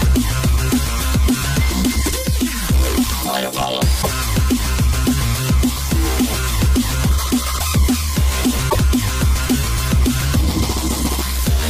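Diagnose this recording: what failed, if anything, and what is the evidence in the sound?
The failure is at the codec stage: damaged data in a compressed stream. Two brief garbled bursts, one at 3.99 to 4.07 s and another at 8.66 to 8.76 s, each lasting roughly 80 to 100 ms, break abruptly into the surrounding sound. Corrupted bytes in those spots made the decoder misread or reject the affected frames, lose sync, and scan forward for the next valid frame header before normal decoding resumed.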